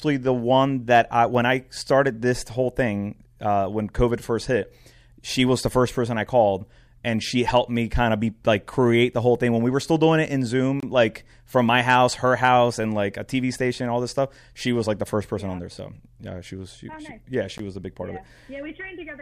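At 10.80 to 10.83 s, between "still doing it in" and "like from my house", and at 17.58 s, after "nice she yeah she", the speech drops out for about 26 ms and 16 ms. These are gaps at a join of encoded pieces: separately encoded segments were spliced with their start delay and end padding left in. Each shows as a thin vertical blank stripe across the spectrogram and a flat waveform with slightly smeared edges.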